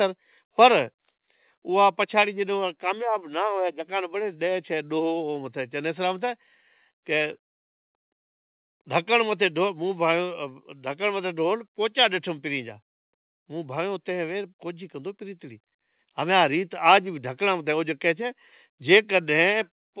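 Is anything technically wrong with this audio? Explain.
Yes, there are three kinds of fault.

Microphone volume stepped down, at 1.02 s and again at 2.22 s. The call software likely judged the input too hot and lowered the device's input volume in single steps, first by about 1 dB and then by about 2 dB. Voice and background drop together at each point, so the level sags abruptly rather than following anything in the speech. The first step is slight, and the second is more noticeable.

Microphone volume stepped up, at 16.0 s. Here the software judged the microphone too quiet and raised the device's input volume in one step of about 3 dB. The speech and the room sound behind it jump up together at that instant, so the level steps rather than building naturally. Because the background rises too, the change sounds like a fader being pushed.

Microphone overload, from 18.93 to 18.97 s. The input volume was set too high for the loudest moment, which likely drove the peaks about 3 dB past the converter's ceiling. 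A small share of samples in that burst were flattened at the limit, so the peak loses its rounded top and gains a brief harsh, crackly edge. The narrowband call path, with nothing above 4 kHz, runs through the clip as well.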